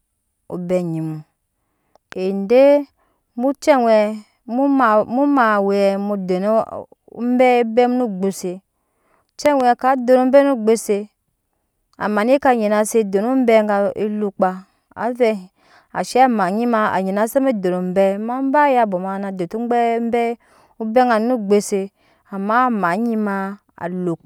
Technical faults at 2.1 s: loud pop

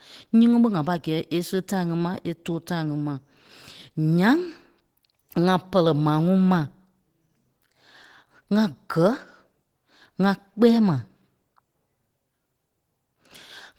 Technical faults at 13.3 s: Opus compression

